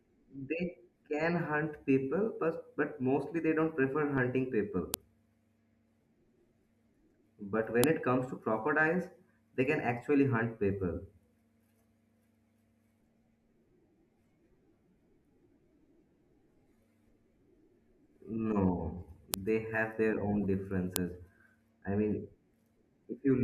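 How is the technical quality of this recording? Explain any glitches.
The recording has one recurring glitch: sharp, loud clicks at 4.94, 7.84, 19.34 and 20.96 s. Each is a file header played as audio. Separately saved WAV pieces were joined without stripping their headers, so a few dozen bytes of metadata were decoded as samples at the start of each piece. Unlike a clipping crackle or a dropout pop, each snap arrives regardless of what the speech is doing at that moment.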